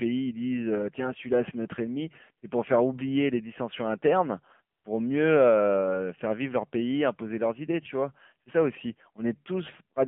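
Throughout, the speech carries the sound of the AMR narrowband mobile codec. The band runs only from 150 Hz to 3.4 kHz, so it is thin and boxy. The codec damage is plainly audible: buzzy, synthetic tone that fits a low rate near 7.4 kbps.

From 4.76 to 4.84 s, AMR comfort noise replaces the real signal. For 80 ms the phone judged the talker silent and sent no speech frames. The receiver filled the gap with smooth synthetic noise, which switches in and out.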